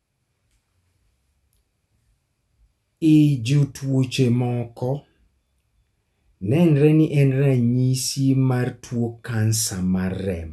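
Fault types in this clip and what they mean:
No faults detected.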